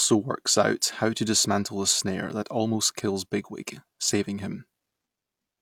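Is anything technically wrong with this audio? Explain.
No, the speech signal shows no audible technical faults at any point in this recording.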